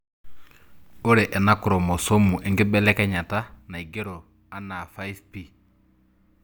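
No technical fault can be heard anywhere in the speech signal, and it stays steady and intact throughout.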